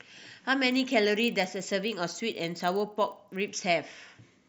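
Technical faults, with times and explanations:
0.68–3.48 s, resampler restarted on every block: each 40 ms block was upsampled alone, leaving an error at every edge that sounds as a 25 Hz buzz beneath the speech.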